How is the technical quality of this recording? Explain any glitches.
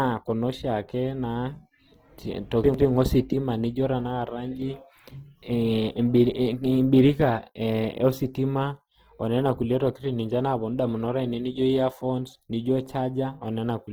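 The recording carries audible compression damage from start to finish. Opus compression is the likely cause: its music mode keeps every band's energy but, starved of bits at what sounds like about 16 kbps, fills detail with folded or noise-like content, so the speech turns grainy and rough. Unlike MP3 there is less swirling, and the bandwidth stays full, up to about 20.2 kHz.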